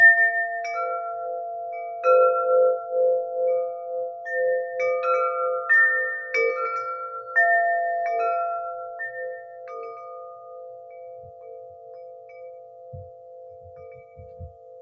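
A recording of everyday sounds, passed through call microphone processing that leaves nothing above 8 kHz, has a noise suppressor meant for speech running on it throughout. Steady and lingering parts keep being pulled down while sharp onsets pass, so the level pumps in swings of roughly 15 dB. Unlike a compressor, it reacts to how noise-like a sound is, not to how loud it is. The sound cut by the noise suppressor is plainest from 1.42 to 2.03 s and from 9.42 to 9.68 s. There it sinks by up to about 4 dB. This is a selective dip in one sound rather than a dropout, because the rest of the audio keeps playing.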